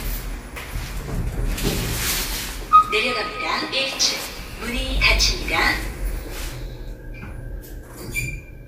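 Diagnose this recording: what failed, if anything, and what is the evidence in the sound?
Jumps at 4.39 s and 6.1 s skip the sound ahead, about 20 ms and 10 ms, with no silent gap as an underrun leaves. This is likely a dropped buffer (overrun) at the driver stage.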